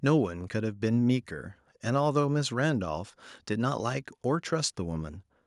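Nothing stood out as a fault anywhere in the speech on listening.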